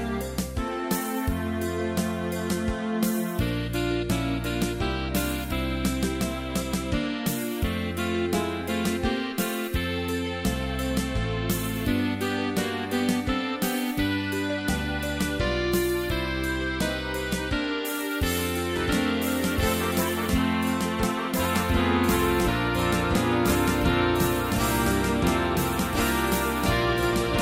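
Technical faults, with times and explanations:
18.76 s to end, doubled audio track: likely a second, slower capture path mixed in, so an equally loud copy trails about one and a half seconds behind, starting abruptly.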